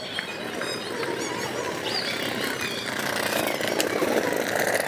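From start to end, the audio runs at the wrong sample rate. Everything plays twice as fast as it should, and pitch rises a full octave, 12 semitones. The two shifts move together because the samples are read out faster with no conversion. A doubling like this fits material made at 16 kHz being played back at 32 kHz. Each event sounds clipped short and squeaky, and the whole clip feels hurried.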